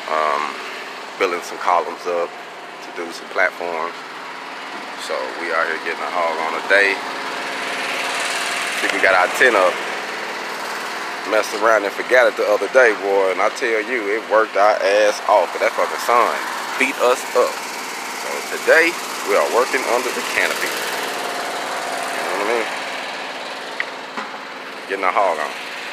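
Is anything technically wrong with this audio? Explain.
No, nothing technically wrong is audible here; the signal shows no faults on listening.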